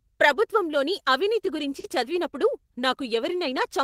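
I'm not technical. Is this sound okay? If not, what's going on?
No. At about 1.79 to 1.86 s, just after "ప్రభుత్వంలోని అవినీతి", there is a short concealed packet loss: about 40 ms of the call arrived too late, so the receiver patched the gap by extending the preceding sound. It comes across as a brief smear or wobble.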